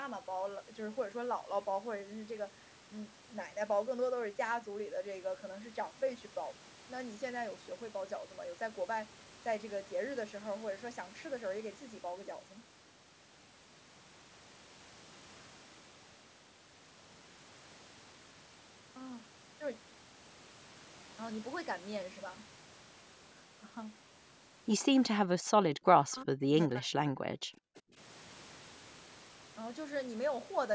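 From 25.18 to 27.98 s, speech suppressed in double talk is the likely cause: with both sides talking, the echo canceller could not tell the talker from loudspeaker echo and turned everything down. The speech dips by as much as about 40 dB, cutting out in pieces for roughly two seconds in total.

From 27.75 to 27.81 s comes an echo leak, likely from a loudspeaker side whose canceller let part of its microphone pickup back through. A faint scrap of the speech returns 380 ms late, around 35 dB below the main speech.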